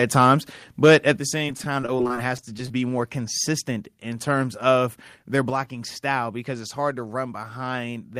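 Right at the start, from 0.83 to 1.1 s, the loudest stretch breaks up with a crackly, flattened edge. That's likely microphone overload: the input was pushing about 5 dB past what the converter could take, so the tops got sheared off, roughly 5 percent of the samples in that span.

Just after, at 1.17 s, everything drops by about 7 dB in one go, voice and background together. That's the microphone volume stepped down, likely the call software reacting to the overload by turning the input down in a single step.

Then from 1.38 to 2.74 s there's repeated packet loss with that robotic, choppy quality. It has 19 little holes, the longest about 22 ms, each patched by stretching out the last bit of sound. About 16 percent of the stretch is filler rather than real audio.

At 5.5 s the microphone volume steps down again, this time by about 3 dB, a sudden drop in level that's likely the same automatic input adjustment kicking in once more.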